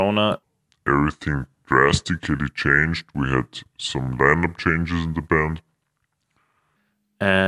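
From 0.43 s to 6.76 s the speech has a wrong sample rate fault. Everything slows to about 0.73 times normal speed. Pitch drops with it, by about 5.5 semitones. Voices sound low, heavy and dragged out. Speed and pitch shift by the same ratio, so the samples are being played out too slowly with no rate conversion. That ratio fits audio recorded at 44.1 kHz but played back at 32 kHz.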